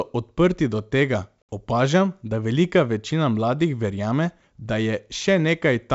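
At 1.42 s, right after "odprti do tega", there's a hard-edged gap of about 70 ms, classic packet loss on an ADPCM call. Around seven packets went missing and were filled with silence, and since ADPCM decodes each sample relative to the last, the decoder's predictor and step size drift away from the sender's. So when speech picks up again at 1.49 s with "opažam da velika večina", it comes back slightly distorted before settling. The 64 kbit/s G.722 wideband coding keeps the speech clear up to 7 kHz.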